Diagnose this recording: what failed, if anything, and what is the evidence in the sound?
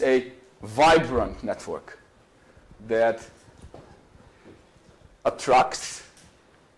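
Nothing in the signal chain can be heard failing: level, continuity and timing hold steady across the whole recording, with no point where the audio breaks, jumps or changes character.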